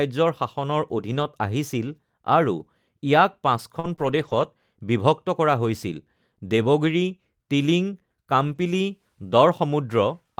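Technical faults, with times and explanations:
1.11–1.25 s, 2.59–2.61 s, 3.84–3.94 s, 3.99–4.45 s and 8.47–8.61 s, lost packets rebuilt from error correction. Packets went missing, but each following packet carried a low-bitrate backup copy. The decoder played those copies, so nothing drops out. Those stretches turn briefly rougher and noisier. The longest, at 3.99 s, lasts about 240 ms.
3.79–3.86 s and 3.96–3.99 s, short concealed packet loss. About 40 ms and then 20 ms of audio arrived too late to use. The receiver extended the preceding sound to fill each hole, then faded back in. Each is heard as a quick smear or wobble around the rebuilt stretches.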